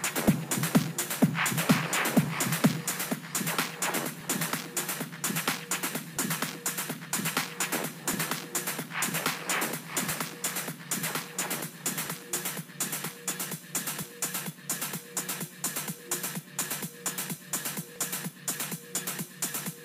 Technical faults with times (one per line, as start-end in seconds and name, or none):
0.28-17.96 clock drift buffer slips